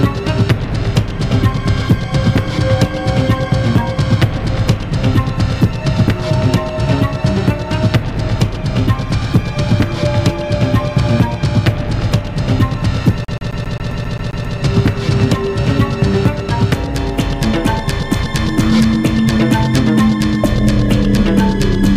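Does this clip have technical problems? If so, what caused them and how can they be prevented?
Yes. From 13.25 to 14.58 s the disc player is stuck on one turn: a scratch keeps knocking the laser back by a single track at the same point of each revolution, so it never advances. The result is a rapid, even stutter in which the same 133 ms fragment plays ten times over, each repeat separated by a brief mute as the pickup jumps back. Cleaning or replacing the damaged disc, or ripping it with an error-correcting drive, prevents this.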